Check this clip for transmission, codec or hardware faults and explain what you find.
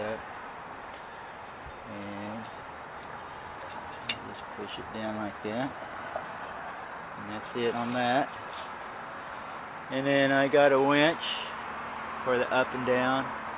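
Two transmission faults occur close together around the middle of the clip. Throughout, the audio is band-limited with nothing above 4 kHz, which points to a narrowband G.711 mu-law call path at 64 kbps.

Skip ahead, 6.22 to 6.24 s: a section of around 0.4 s of audio never reaches playback. The jitter buffer likely overflowed and discarded it while later audio was already queued. Nothing fills the hole, so the sound on either side is spliced almost directly. It is heard as an abrupt forward jump, with the material that should have come next simply absent and the playout delay shortened by roughly the same amount.

Jitter buffer speed-up, 6.32 to 7.73 s: immediately after the jump, the receiver still holds more audio than its target. It works the backlog down by repeatedly cutting out short segments one or a few pitch periods long, removing about a fifth of a second in total. Playback runs at 112% speed with pitch unchanged, so this stretch sounds noticeably hurried and its timing is compressed relative to the surrounding audio.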